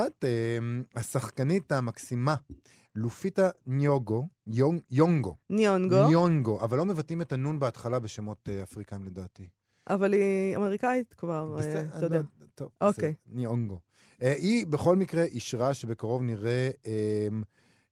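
No technical faults occur anywhere in this speech recording, so there are none to describe in time order.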